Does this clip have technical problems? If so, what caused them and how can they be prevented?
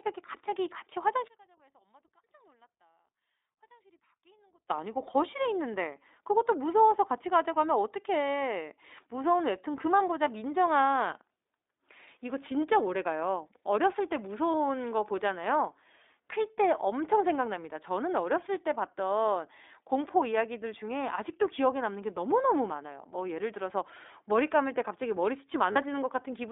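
Yes. The whole clip has iLBC codec damage: speech is confined to roughly 300 Hz to 3.7 kHz and sounds rough and synthetic, which fits 15.2 kbps iLBC with 20 ms frames. That roughness distinguishes it from simple band-limiting. To prevent this, use a wideband codec wherever the network allows one.

From 1.28 to 4.70 s the level drops by about 34 dB, leaving a faint residue rather than silence, which distinguishes it from a dropout. The likely cause is one channel inverted, so the mono sum cancels. To prevent this, check channel polarity before downmixing.

Lost iLBC frames occur at 14.52 to 14.54 s (20 ms) and 25.72 to 25.78 s (40 ms). Each sounds like a brief held, slightly buzzy or breathy vowel rather than a silent gap or click, and the voice recovers immediately. To prevent this, use jitter buffering or forward error correction on lossy links.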